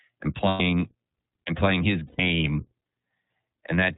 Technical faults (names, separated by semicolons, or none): iLBC codec; lost iLBC frames